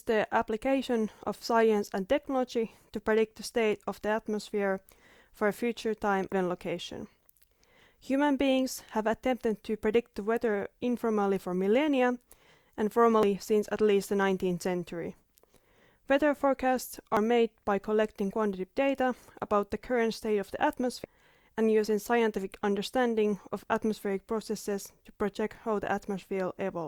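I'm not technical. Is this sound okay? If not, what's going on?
No. Damaged data in a compressed stream causes brief chirps or blips at 6.32, 13.23 and 17.17 seconds, and from 21.04 to 21.06 seconds. Part of the stored audio was corrupted there, so the player misreads it, loses its place and hunts for the next clean section.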